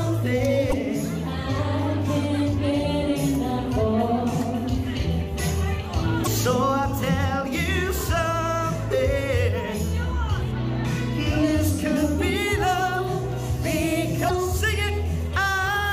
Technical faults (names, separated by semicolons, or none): damaged data in a compressed stream